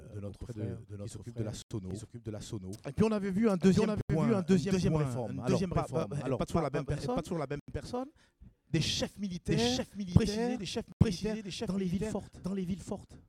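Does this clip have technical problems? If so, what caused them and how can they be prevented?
Yes. A second copy of the whole signal is mixed in, likely from the audio being captured twice, once through a slower path, so it forms a doubled audio track. That copy trails the original by about 0.7 s at roughly the same loudness. It has no decay and no room colour, so every sound is followed by a hard, full-band repeat rather than a natural echo. To prevent it, route the source through a single capture path and mute any monitoring or loopback input feeding the recording.

At four points the output buffer was not filled in time and was sent out as zeros. Each time this leaves a block of digital silence about 85 ms long, which fits a 4096-sample buffer. The blocks fall at 1.62–1.71 s, 4.01–4.10 s, 7.60–7.68 s and 10.92–11.01 s. The audio drops straight to nothing and back with no fade, so each one sounds like a short hole. 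To prevent it, give the audio thread more headroom, either with a larger buffer or by reducing processing load, so every buffer is ready before the deadline.

The audio was also handled in 4-second chunks, and each chunk began before the previous one had finished. These overlapping chunks replay about 23 ms of sound at each join, at 1.91–1.93 s, 6.02–6.04 s and 10.12–10.15 s. Each join is heard as a brief stutter. To prevent it, align chunk boundaries exactly, or crossfade and trim the overlap when the chunks are joined.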